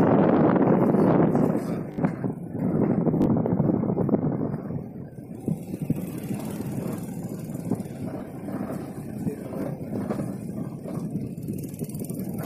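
Short stutters break the sound at 1.92–1.98, 3.22–3.26, 8.18–8.20 and 9.62–9.64 s, each one a tiny slice replayed with hard joins. These are repeated buffers: new audio arrived late, so the device replayed its last block, which fits a 20 ms buffer.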